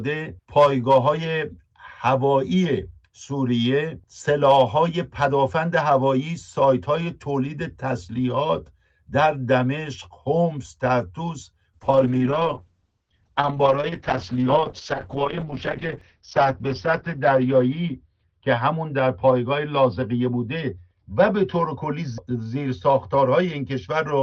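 A call bitrate drop begins at 11.74 s and lasts to the end of the clip. The bandwidth estimate fell and the encoder was told to spend far fewer bits, a fall that points to roughly 48 kbps down to about 7 kbps, with the lowest rate held for about 5.2 s. The coarser coding makes the sound rough and watery, and the top end is cut off, dropping from about 20 kHz to 6 kHz, so everything turns muffled and never recovers.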